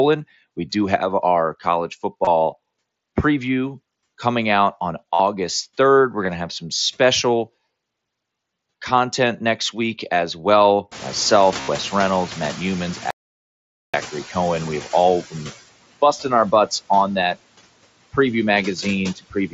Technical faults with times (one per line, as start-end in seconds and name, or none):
0.00-19.54 noise suppressor artifacts
2.25-2.27 concealed Bluetooth headset packet loss
5.14-5.20 concealed Bluetooth headset packet loss
6.22-6.28 concealed Bluetooth headset packet loss
10.91-14.98 noise suppressor catching up
11.61-11.68 concealed Bluetooth headset packet loss
13.11-13.94 audio dropout to silence
16.13-16.25 speech cut by the noise suppressor
16.97 concealed Bluetooth headset packet loss
19.16-19.54 speech cut by the noise suppressor